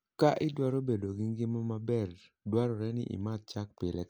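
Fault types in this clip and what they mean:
No technical faults detected anywhere in the speech; nothing to list.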